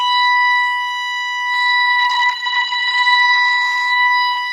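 At 1.55 s the music suffers a call bitrate drop that lasts to the end of the clip. The encoder was starved of bits, consistent with a fall from around 32 kbps to about 10 kbps, so it coded the music coarsely and narrowed the bandwidth from 20 kHz to 8 kHz. The sound turns muffled and watery, bottoming out for about 1.8 s. A spectrogram shows content above 8 kHz abruptly vanishing, with a smeared, blotchy texture below.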